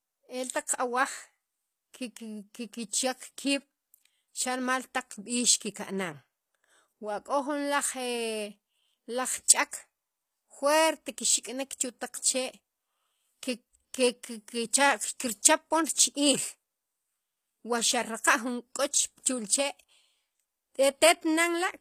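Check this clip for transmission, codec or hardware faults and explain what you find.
One codec fault runs through the whole clip. The treble of this speech sounds false: s sounds come out gritty and lispy, with a metallic sheen, and nothing is present above 14.9 kHz. This is likely HE-AAC compression at a low bitrate, around 24 kbps. Only the lower spectrum is actually coded. The upper bands are rebuilt by copying lower content upward under a coarse envelope, so harmonics no longer line up across the crossover, and the result is plainly audible.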